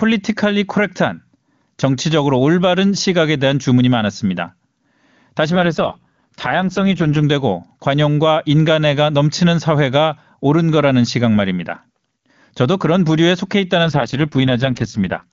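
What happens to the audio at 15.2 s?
The voice turns rough, raspy and synthetic, with no gap and no loss of bandwidth. This is an AMR rate drop from 13.84 to 15.32 s: the network pushes AMR-WB down from 23.85 to 6.6 kbit/s, its lowest rate, so little detail survives.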